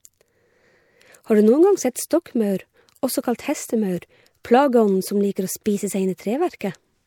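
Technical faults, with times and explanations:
5.64–5.66 s and 6.59 s, pre-echo: just after "plageånden som liker å", and again at 6.59 s, a hiss lasting 20 ms and then 18 ms runs ahead of a sharp speech attack, leaving the onset softened and smeared. The transform codec spread its quantisation noise evenly over each block. The loud attack sat late in its block, so noise sized for that attack also spilled into the quiet moment before it, where nothing masked it.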